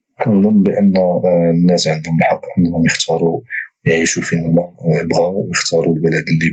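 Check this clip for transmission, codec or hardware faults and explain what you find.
Gain pumping runs through the whole clip, heard through a call path whose top end stops near 8 kHz, as this Opus setting does. The input gain was likely set far too high, so a fast limiter clamps each loud stretch of speech. The gain swings by around 15 dB, leaving everything squashed.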